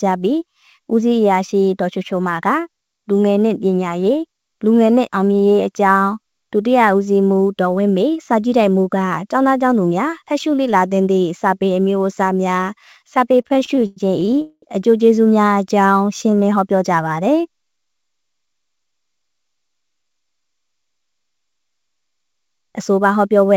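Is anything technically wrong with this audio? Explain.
Yes. There are four distinct faults, heard over a band-limited call path with nothing above 8 kHz, consistent with a wideband codec such as G.722.

Sample clock jitter runs through the whole clip. The converter's clock wanders by a few microseconds, so each sample is taken slightly off time. The resulting error scales with how fast the waveform is changing, sitting roughly 35 dB below the signal. It comes across as a fine hiss or grittiness that swells on loud, bright passages and disappears in quiet stretches.

Repeated stalls (stutter) occur between 13.32 and 14.41 s. The audio halts in a rapid series of short breaks, the longest about 102 ms. Packets were arriving late or too slowly, so the jitter buffer kept emptying, and each time the receiver stretched the last sound until more data came in. About 295 ms was filled this way, roughly 27% of that span. 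Nothing is lost, but the sound drags and judders.

A call audio freeze follows immediately, from 14.42 to 14.65 s. The sound holds as a decaying buzz or hiss for about 208 ms and ends in roughly 30 ms of silence before resuming exactly where it stopped. This is likely due to packets being held up in transit, which drained the buffer and forced the receiver to invent audio. It also added about 208 ms of delay.

A jitter buffer slow-down appears from 15.75 to 16.44 s. With its reserve low, the buffer rebuilt it by repeating individual pitch periods and fragments of pauses. This added about 89 ms, so the passage plays at roughly 88% speed with unchanged pitch. Sounds are drawn out.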